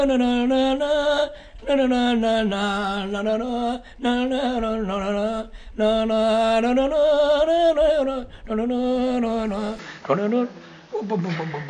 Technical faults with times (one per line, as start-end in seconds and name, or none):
9.79-11.69 input switched to a poorer device